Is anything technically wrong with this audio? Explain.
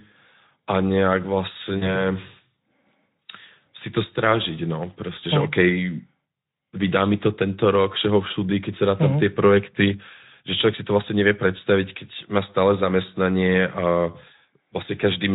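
Yes. From 1.77 to 2.03 s the speech briefly smears into a stretched sound that fades, and the voice stays weak or distorted for a moment after the gap. This is VoIP packet loss concealed by the speech codec. About 40 ms of audio went missing, which fits two lost 20 ms frames. The decoder filled the hole by extending its last pitch and spectral shape at falling gain, and because each later frame builds on that guess, the damage lingers past the loss. The Speex coding is light.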